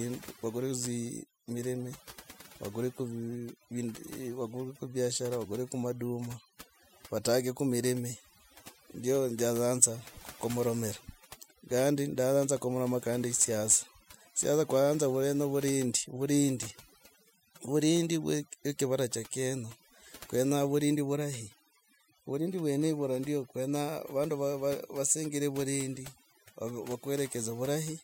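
Overdone noise removal runs through the whole recording. A noise reduction stage was pushed too hard. Any frequency band that comes close to its estimate of the noise gets pulled far down or shut off. The quieter parts of the voice fall below that line and vanish with the noise. Between phrases the background drops and breaks up into small twinkling specks.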